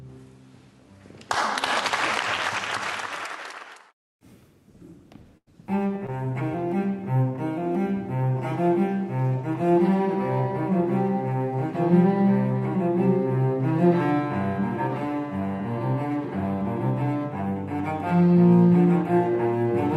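At 1.42 s a couple of samples were likely lost from the stream, so the waveform jumps abruptly and a single sharp click is heard. From 5.37 to 5.48 s a burst of packet loss removed about 100 ms of audio. The receiver filled roughly 90 ms by stretching and fading the last sound, which produces a held buzz or fading hiss before playback resumes further on. Between 6.06 and 6.10 s, a short concealed packet loss left a 20 ms hole. About 14 ms of it was synthesized from the preceding sound and blended back in, heard as a brief smear or wobble.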